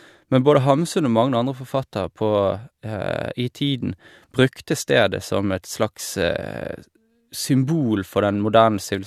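No technical faults are audible anywhere in the speech recording.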